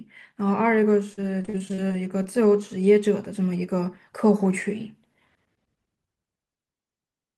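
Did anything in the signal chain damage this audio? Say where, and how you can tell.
Yes, the damage happens at the network stage: repeated packet loss (robotic sound) between 1.13 and 2.26 s. The speech breaks into ten short holes, the longest 41 ms. Each gap is bridged by stretching the preceding sound, about 218 ms of patching in all, about a fifth of that stretch. That repeated looping is what gives the robotic texture. A single dropout would leave one clean hole, and codec warble smears continuously rather than stuttering.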